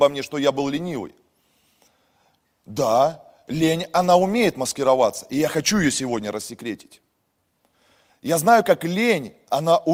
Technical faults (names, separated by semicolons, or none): none